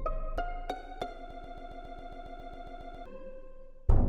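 At 1.31 s the sound catches and starts stuttering: a single 137 ms slice plays back to back, identical each time, thirteen times over until 3.06 s. It's a broken-record loop. What you're hearing is most likely a stalled player or stream that kept pushing out the last fragment it had in hand rather than new material, so whatever should have filled those 1.75 seconds is simply gone, replaced by that rapid, mechanical repetition.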